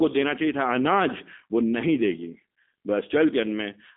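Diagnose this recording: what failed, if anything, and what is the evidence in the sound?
The failure is at the codec stage: G.729 coding throughout. The speech is band-limited to roughly 250 Hz to 3.6 kHz. It sounds plainly rough and synthetic, which fits 8 kbit/s G.729A. Each 10 ms frame is rebuilt from a vocal tract filter, pitch predictor and sparse pulses, not the true waveform.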